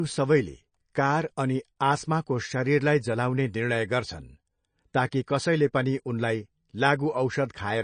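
From the start to the end, the speech has no content above about 9.3 kHz. The treble stops at that fixed edge. Weak frequency detail flickers in and out between frames, so the sound turns watery and swirly. S sounds chirp and go metallic. Attacks smear. The damage is plainly audible. The likely cause is MP3 compression at a low bitrate, short enough on bits that the encoder cut the top band and dropped quiet lines. The sound points to roughly 34 kbps.

At 5.11 s, a pre-echo comes just before "कसैले पनि उनलाई". A short hiss arrives about 12 ms ahead of the attack. The codec spread its quantisation noise across a whole block. That noise was sized for the loud onset late in the block. It also filled the quiet instant before it. The onset loses its edge and sounds soft and smeared.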